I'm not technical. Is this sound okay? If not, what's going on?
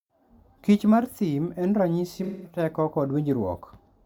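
No. AAC frame loss with concealment occurs from 2.23 to 2.59 s. A stretch of the compressed audio went missing, so the player filled the gap by guessing from the last good sound. That guess comes out as a smeared, hazy patch in the speech.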